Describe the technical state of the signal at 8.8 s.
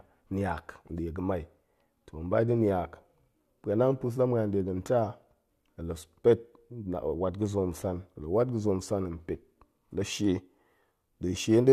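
At 8.8 s the speech signal is intact, with no audible technical fault at that moment.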